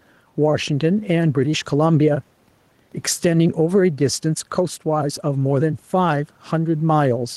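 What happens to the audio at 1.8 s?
At 1.8 s, as throughout, background noise swells in gaps and ducks around 5 dB under loud speech: gain pumping, likely excess gain driving a fast limiter.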